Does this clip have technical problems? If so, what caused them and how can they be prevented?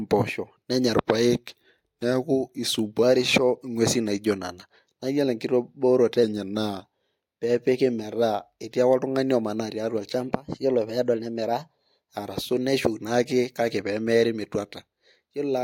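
Yes. A drift correction step, likely clock-matching software abruptly changing the playback rate, slows the speech by 6.3% and lowers pitch 113 cents from 0.94 to 3.03 s and from 6.23 to 6.84 s. Right after "omanaa tiatua" it speeds up by 6.3% and raises pitch 106 cents from 10.16 to 12.14 s. Prevent it by locking devices to a shared clock or correcting drift with small, gradual resampling changes instead of sudden rate jumps.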